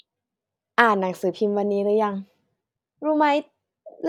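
No technical faults can be heard anywhere in this speech recording.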